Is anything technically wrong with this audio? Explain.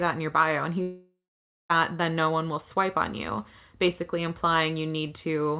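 Yes. From 0.82 s to 1.71 s the speech breaks off. The last sound is stretched into a buzzy, smeared tone that fades, and the final half second or so is plain silence before speech resumes with that stretch simply gone. This is most likely a long network dropout: nearly 0.9 s of audio never arrived, so the receiver kept extending the final received sound to cover the gap, let it decay, and then went quiet until packets resumed. The call path's G.711 mu-law codec leaves nothing above 4 kHz, which is why the speech sounds narrowband throughout.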